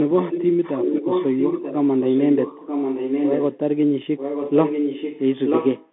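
Throughout, the sound is boxed into roughly 200 Hz to 3.5 kHz, with scratchy s sounds and a granular hiss beneath. This is the Bluetooth CVSD headset codec, whose one-bit adaptive steps cannot keep up with the sound, which fits a 64 kbps link.

From 0.01 to 3.58 s, again from 4.17 to 5.21 s and from 5.46 to 5.87 s, a second copy of the speech trails 936 ms behind, only a little quieter than the original. This echo leak is likely a far-end loudspeaker whose echo canceller let its own playback back into the microphone.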